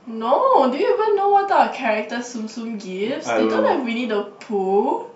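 Nothing technically wrong turns up anywhere in this speech recording, so there are no times or causes to point to.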